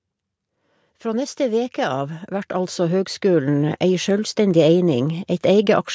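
A speech recording with automatic gain rising: from about 1.02 s to 4.43 s the level climbs steadily by about 11 dB, and the background comes up right along with the talker. That's the giveaway. The automatic gain control decided the input was too quiet and kept nudging its gain upward over those three-plus seconds. The call-style microphone processing is also audible, with the bandwidth topping out around 8 kHz, but that's expected behaviour, not a fault.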